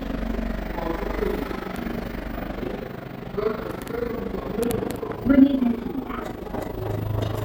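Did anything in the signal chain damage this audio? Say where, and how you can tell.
Yes: a rough flutter of about 11 dB runs throughout, pulsing around 30 times a second. This is overlap-add ripple: frame-based processing recombines windows whose overlap doesn't sum evenly.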